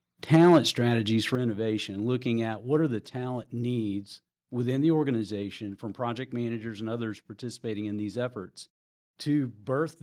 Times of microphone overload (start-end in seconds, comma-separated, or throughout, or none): 0.33-0.58